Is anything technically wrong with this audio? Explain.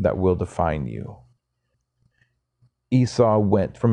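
Yes. Frames out of order from 1.37 to 2.11 s, after "will define you". Two neighbouring 0.37 s blocks were decoded swapped. This causes a garbled flutter.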